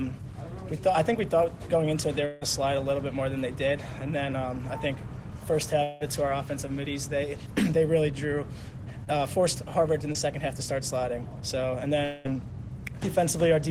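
At 2.25 to 2.43 s the likely cause is a long network dropout. About 160 ms of audio never arrived, and the receiver filled almost the whole gap by extending the last sound. The result is a stretched buzz or hiss that fades without ever reaching full silence before the real signal resumes, with that slice of content gone. The same smeared fill-in returns at 5.83 to 6.02 s, where about 180 ms is missing.

At 9.04 to 9.09 s a short concealed packet loss occurs. Roughly 20 ms of data failed to reach the decoder in time, so the receiver synthesised a replacement from the preceding sound and blended it back into the real audio. It comes across as a brief wobble or smear. Another 20 ms gap is patched the same way at 10.13 to 10.17 s.

At 12.05 to 12.27 s a third likely long network dropout removes about 200 ms, again bridged by a fading buzz or hiss extending the prior sound rather than silence.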